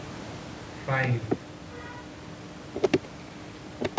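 No technical faults are audible in this speech recording.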